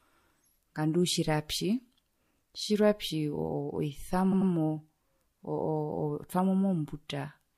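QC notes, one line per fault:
4.31–4.50 s, repeated frames: a 92.9 ms block of compressed frames was delivered twice more, so that slice replays as a stutter, lengthening the speech by 185.8 ms.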